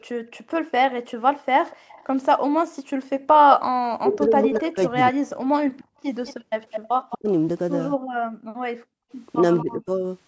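A speech recording of a hands-free call with three echo-canceller problems. There's background gated by the echo canceller from 0.0 to 3.28 s and again from 5.45 to 9.11 s: the room sound ducks by as much as about 40 dB, around a second of dropouts in the first stretch and a second and a half in the second. An echo leak brings a delayed copy of the voice back at 1.66 to 3.37 s (243 ms late, roughly 20 dB down), 4.88 to 7.16 s (211 ms late, louder at roughly 10 dB down), and briefly at 9.58 s. That likely comes from the loudspeaker side's canceller letting some of its loudspeaker pickup through. There's also speech suppressed in double talk. The talker's voice dips by up to roughly 40 dB over 3.97 to 5.17 s, cuts out briefly at 7.13 to 7.29 s, and drops by a milder roughly 15 dB at 9.61 to 10.04 s, likely with both sides talking at those moments. The band stops at 8 kHz, which is just the call microphone processing doing its job.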